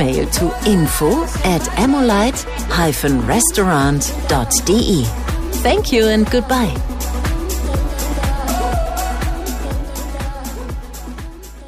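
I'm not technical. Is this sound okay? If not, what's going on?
Yes, it sounds fine.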